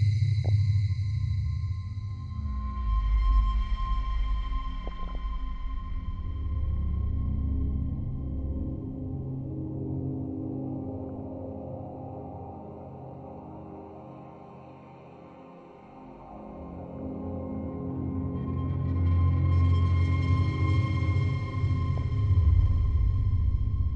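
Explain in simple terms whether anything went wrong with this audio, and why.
A couple of things went wrong here. The whole clip sounds dull and clearly gurgly, with a grainy edge, and the top end keeps flickering in and out. That's MP2 compression, most likely squeezed too hard. The format splits the sound into narrow frequency slices, and when it's short on data it shuts off the highest slices and rounds the rest roughly. You get exactly this muffled, bubbly texture, like low-quality digital radio.

On top of that there are five short bursts of DAB burbling: at 0.45 to 0.49 s, 4.84 to 5.15 s, 11.06 to 11.21 s, 16.96 to 17.07 s and 21.97 to 22.02 s. The one around 5 s is the longest and messiest. It happens when reception errors slip through and corrupt bits of the compressed data, so individual frequency slices briefly jump to the wrong level.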